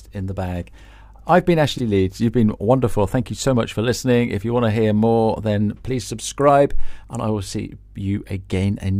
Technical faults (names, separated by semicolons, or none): frames out of order